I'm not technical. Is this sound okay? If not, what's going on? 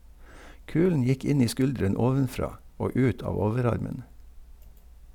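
Yes, nothing in this speech recording signals a technical problem with how it was captured or played back.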